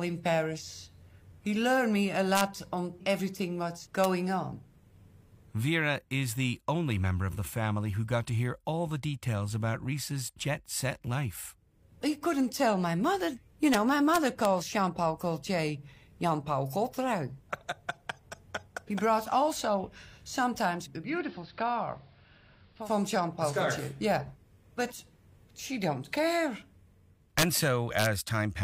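Integer overflow cracks sharply at 2.35 to 2.41 s, 4.04 s, 13.74 s and 14.14 to 14.45 s. Loud peaks barely past full scale wrap to the opposite sign instead of limiting, so the waveform shows full-height vertical jumps where a clipped flat top would be.

From 20.98 to 22.92 s, digital radio blending to analogue AM fades in over about 208 ms. The level drops about 3 dB and a faint hiss rises.

Integer overflow returns at 27.39 to 27.57 s and 27.99 to 28.06 s. These peaks are driven about 3 dB over, so the wrapped spikes and cracks are harsher here.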